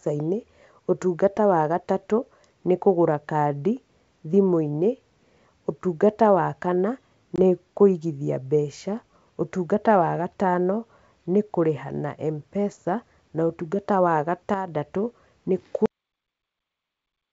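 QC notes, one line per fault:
7.36–7.39 s, packet loss on an ADPCM call: a short, hard-edged hole of about 20 ms opens in the speech, as if a couple of packets went missing and were filled with silence. When the speech returns, its texture is briefly off, with some roughness. The decoder's adaptive predictor and step size were thrown off by the gap and no longer matched the sender's, so they need some tens of milliseconds to track back into step.
14.54–14.68 s, sudden gain jump: the speech and the background noise under it drop together by about 6 dB in a single step, with no fade. Because everything shifts at once, including the noise floor, this points to the digital gain being switched instantly rather than ramped. The likely cause is a level setting or bit shift applied from one sample to the next.
15.86 s, cut-off end: the audio stops dead in the middle of a sound and falls straight into digital silence, with no decay or room tail. 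Nothing is heard from there to the end of the clip. The final buffers were never written out or played, so the signal ends wherever the last delivered block happened to finish. The wideband G.722 coding sounds clean up to that point.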